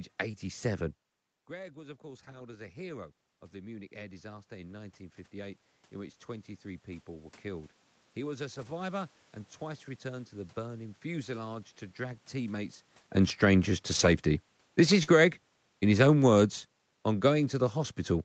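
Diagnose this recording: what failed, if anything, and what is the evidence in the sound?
Network, with decoder concealment. A short concealed packet loss occurs at 0.31–0.35 s, where about 20 ms of audio never arrived, and another at 15.03–15.09 s, with about 40 ms missing. The decoder extended the preceding sound to cover each hole, heard as a brief smear or wobble.

Network, with codec recovery. Lost packets were rebuilt from error correction at 0.33 s, 2.15–2.41 s, 8.57–8.71 s, 13.91–14.09 s and 15.07 s. Each loss was replaced by the low-bitrate redundant copy carried in Opus in-band FEC, so there are no gaps, but those stretches sound rougher and noisier.

Call processing. Automatic gain rising runs from 1.48 s, just before "to drag", through 11.77 s. The input level dropped by about 17 dB as the talker moved back, and the AGC slowly added about 12 dB of gain, so the voice and room noise swell together.

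Call processing. Automatic gain falling begins at 13.15 s and continues to the end of the clip. The AGC judged the input too loud, or its background noise too strong, and gradually pulled its gain down, so the voice and background sink together.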